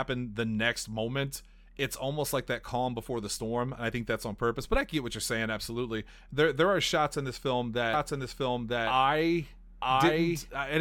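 From 7.93 s, right after "shots in this film", a second full-band copy of the speech cuts in abruptly, trailing the original by about a second and roughly as loud, so each phrase is heard twice to the end of the clip. The echo is dry, with no decay or room colour. This is a doubled audio track, likely from the same signal being captured again through a slower path, or from an edit holding two out-of-step copies.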